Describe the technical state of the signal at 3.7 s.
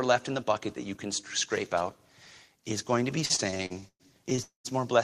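Late packets repeatedly drained the jitter buffer from 3.25 to 4.4 s, after "going to be", causing repeated stalls (stutter): twelve gaps of continued sound make the speech drag.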